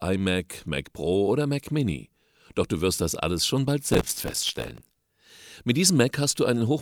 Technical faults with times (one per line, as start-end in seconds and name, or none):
3.92-4.96 processor overload crackle